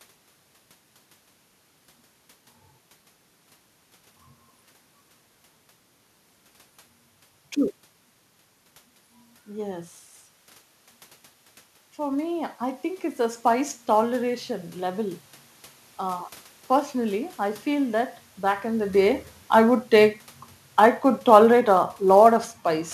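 Throughout the speech there is sample clock jitter: the converter's clock wanders by a few microseconds, smearing each sample's timing into a roughness about 30 dB below the signal. Unlike the steady room noise, it swells on loud, bright syllables and disappears in pauses. From 11.97 to 17.39 s, after the talker's level drops by about 11 dB, the automatic gain rises by about 6 dB. Voice and room noise climb together, unlike the voice-only shift when the talker moved around 9 s, and it settles just before "I feel that back". From 18.96 to 22.45 s, just after "that back in the", the automatic gain falls by about 4 dB, lowering voice and background together rather than the voice alone.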